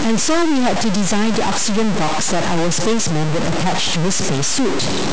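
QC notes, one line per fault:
throughout, stuck bit: one data bit likely held fixed, shifting about half the samples by a step near -15 dBFS, so the speech buzzes harshly and the pauses fill with noise.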